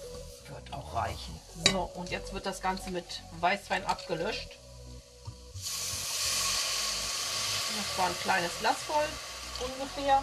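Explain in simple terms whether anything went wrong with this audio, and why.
Nothing went wrong; I can't hear any problems.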